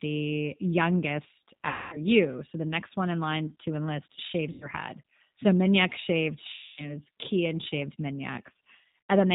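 Throughout, the speech sounds slightly rough and synthetic and is held under 4 kHz, with plainly audible coding damage. This is the G.729 codec at 8 kbit/s. It does not store the waveform. It rebuilds each 10 ms frame from a vocal tract filter, a pitch predictor and a few pulses, and that sparse rebuild gives the voice its grainy, artificial edge.

VoIP packet loss concealed by the speech codec shows up four times. At 1.68 to 1.99 s the speech smears and fades, consistent with about 240 ms of missing audio. Just after "in line to enlist", from 4.52 to 4.68 s, a shorter gap of about 90 ms blurs the same way. At 6.53 to 6.94 s another 240 ms stretch turns weak. At 9.10 s a final 90 ms loss cuts in briefly. In each case the decoder keeps extending its last pitch and filter while lowering the gain. Because each frame builds on the one before, the voice stays thin for a moment after the stream returns.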